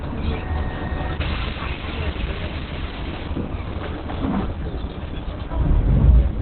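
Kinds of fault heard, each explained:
Opus compression: The audio was likely squeezed through the Opus codec at a very low bitrate, one that fits roughly 12 kbps, where the encoder falls back to its speech-oriented SILK mode and keeps only a narrow band. The result is heavy damage throughout: nothing remains above about 4.3 kHz, so the sound is muffled and boxy, and what survives has a hoarse texture rather than clean detail.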